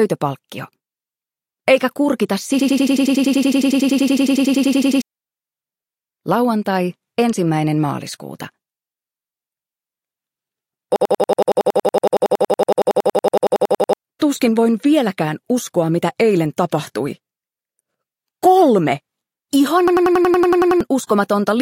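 System hang loop at 2.60–5.02 s, 10.96–13.93 s and 19.88–20.81 s: each time a single 93 ms slice of audio repeats exactly at about 10.8 Hz, giving a machine-gun stutter, which fits a 4096-sample ring buffer replayed while the system froze. The program material during those stalls is missing, roughly two seconds, three seconds and one second respectively, and the audio resumes at a later point once each hang clears.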